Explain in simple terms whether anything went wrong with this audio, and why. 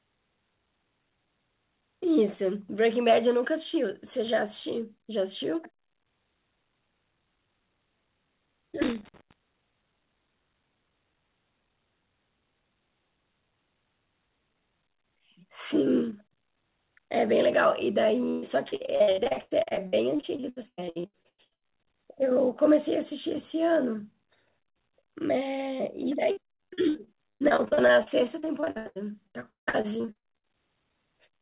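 Yes, a couple of things went wrong. From 8.82 to 9.33 s there's a burst of loose connector crackle: a worn or dirty contact kept making and breaking for about half a second, chopping the speech into a scratchy, irregular crackle.

Then there's repeated packet loss (robotic sound), twice: 18.3 to 21.68 s and 26.31 to 30.44 s. Bits of the call kept going missing, and each hole got patched by stretching the last sound, so the speech turns choppy and robotic. The gaps run up to about 0.12 s in the first stretch and 0.17 s in the second, and roughly a third to nearly half of each stretch is filled-in sound rather than the real thing.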